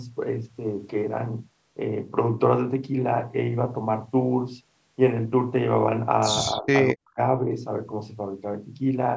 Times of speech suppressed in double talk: 6.52-6.68, 6.93-7.18

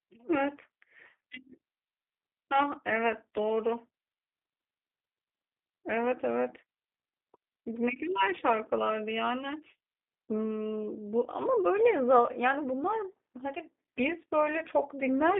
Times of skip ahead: none

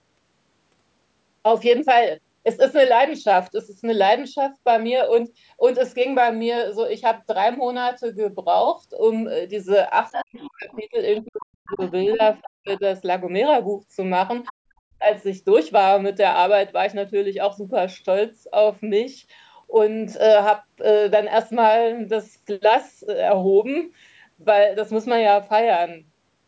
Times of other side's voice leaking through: 10.11-10.79, 11.17-11.27, 11.67-12.79, 14.45-14.53

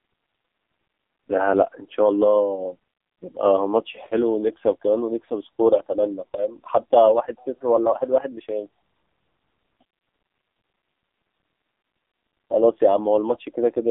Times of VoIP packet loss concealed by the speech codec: none

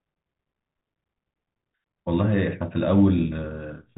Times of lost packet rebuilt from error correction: none

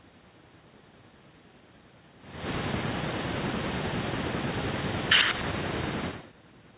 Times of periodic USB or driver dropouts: none

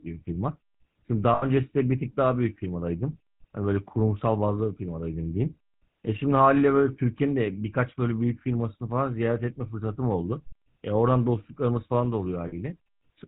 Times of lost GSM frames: 1.34-1.44, 12.48-12.54

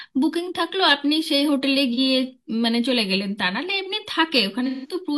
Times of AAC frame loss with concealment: 1.93-1.99, 4.66-4.94

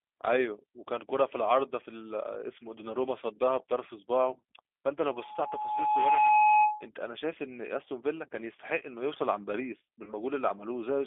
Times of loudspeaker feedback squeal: 5.08-6.89

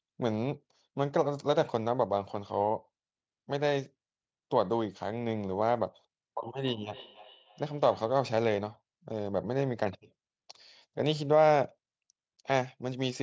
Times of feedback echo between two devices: 6.65-8.27

